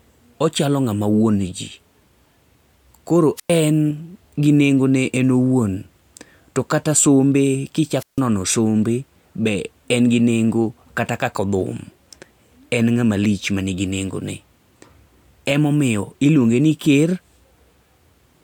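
Speech clip with two wireless microphone squelch dropouts, at 3.36–3.51 s and 7.98–8.21 s. Each time, hiss rises as the FM radio signal fades and the receiver's squelch then mutes the output, leaving holes of about 100 ms and 154 ms.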